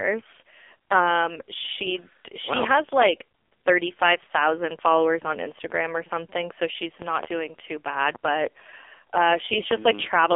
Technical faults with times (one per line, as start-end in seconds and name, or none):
0.00-10.35 AMR narrowband mobile codec